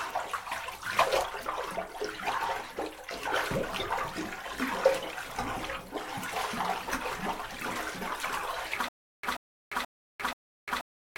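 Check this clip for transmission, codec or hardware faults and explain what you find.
One fault appears: a stutter with silent gaps from 8.89 s to the end. A 133 ms burst repeats four times, about every 481 ms, with 349 ms of digital silence between. A stalled stream is the likely cause.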